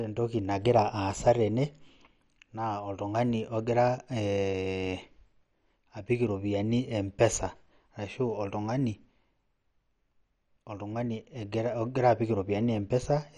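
MP2 compression runs throughout the speech, from start to finish: the sound is dull, with nothing above 11.4 kHz, and carries a plainly audible gurgling, granular roughness as starved upper sub-bands drop out and coarsely quantised ones remain, likely from a low-rate MPEG Layer II encode around 48 kbps.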